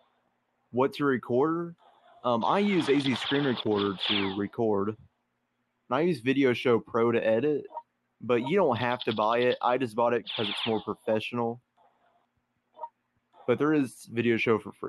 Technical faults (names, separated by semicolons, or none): noise suppressor applied to music or sounds; sound cut by the noise suppressor